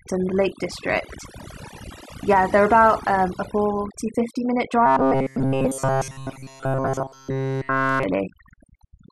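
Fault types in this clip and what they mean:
Overdone noise removal: A noise reduction stage was pushed too hard on a noisy speech recording, cutting individual frequency bands right down wherever they came close to its idea of the noise floor. Throughout the clip the background drops, with twinkling specks where bands flicker on and off. The quieter parts of the voice are removed along with the noise.
Robotic sound from repeated short buffers: From 4.86 to 8.03 s, fresh audio stops arriving in time, and the likely cause is playback filling each gap by looping the most recent few milliseconds while the real signal is skipped. Essentially all of that stretch is made of repeats. The loop imposes a fixed 134 Hz buzz, which fits a repeated segment of about 7.5 ms. The voice becomes a rigid metallic drone that only loosely follows the speech.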